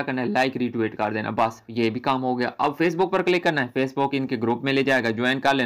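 No technical faults can be heard anywhere in the recording. Nothing in the audio breaks, drops out or changes unexpectedly at any point.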